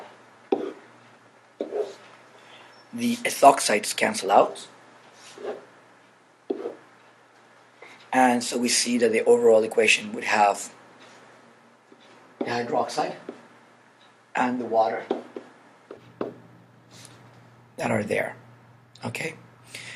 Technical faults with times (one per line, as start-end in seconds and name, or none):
0.00-15.97 input switched to a poorer device